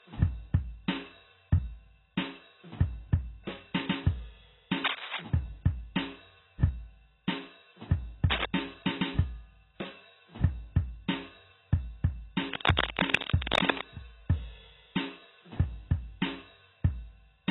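The whole piece of music carries heavy AAC compression damage, likely from a very low bitrate around 16 kbps: nothing above 3.9 kHz, dull and smeared. Cable scratch noise then hits at 4.84 to 5.22 s, 8.30 to 8.45 s and 12.51 to 13.86 s, with rustly bursts sitting about 5 dB over the music, likely from a worn connector being moved.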